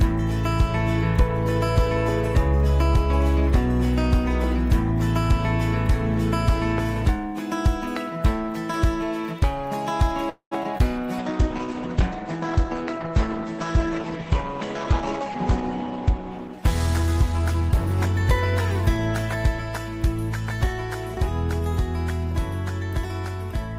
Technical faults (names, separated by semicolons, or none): call audio freeze; short concealed packet loss; call bitrate drop; jitter buffer speed-up